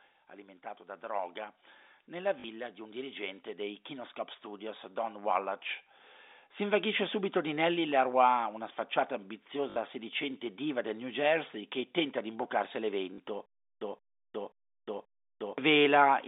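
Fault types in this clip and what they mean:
Automatic gain rising: the gain control lifts level gradually, by about 8 dB from 2.09 to 5.67 s after "alimentato da droga", raising voice and background together.
Packet loss with last packet repeated: lost audio is filled by replaying the previous fragment, giving short robotic stutters at 2.4 s, 9.7 s and 13.14 s, lasting 40, 60 and 40 ms.
Stutter with silent gaps: from 13.46 to 15.58 s, a 172 ms fragment returns four times every 531 ms with about 359 ms of silence between, likely a stalled stream retrying.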